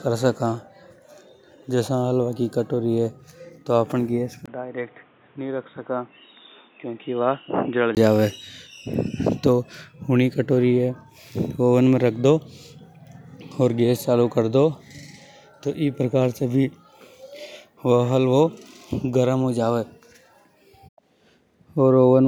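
At 4.46 s the speech abruptly turns dull and boxy after a 20 ms gap, with nothing above 3.8 kHz, the level dropping by roughly 5 dB and new background noise appearing about 30 dB below the voice. At 7.97 s the full, clear sound returns. The likely cause is an input switched to a poorer device, such as another microphone or a headset's call profile, whose narrower band, weaker level and own noise replaced the original input.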